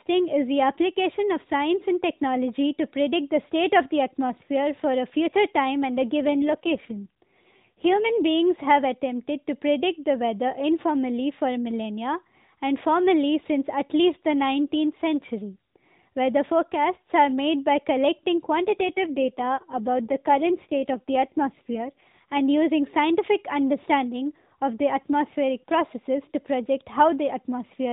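A speech recording carried over an AMR narrowband mobile link, band-limited below 4 kHz with only light codec colouring, suffers two AMR rate drops, from 6.19 to 8.28 s and from 18.64 to 22.41 s. In each stretch the link falls back to a leaner coding mode, which fits a switch from 12.2 to 5.9 kbps, and the voice turns buzzier and more synthetic without any gap or change in bandwidth before clearing again.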